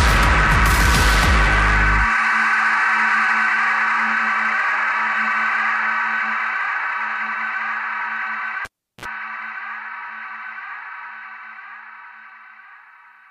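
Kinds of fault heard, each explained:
Cable pulled and plugged in: a pop near 8.65 s, about 0.35 s of near silence, a brief 60 Hz mains buzz, then a second pop, unlike a steady dropout.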